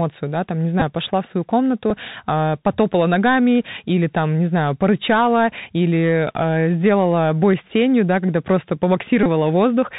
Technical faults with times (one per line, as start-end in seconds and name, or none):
0.00-9.99 Bluetooth CVSD headset codec
0.80-0.82 Bluetooth headset packet repeated
1.90 Bluetooth headset packet repeated
9.23-9.26 Bluetooth headset packet repeated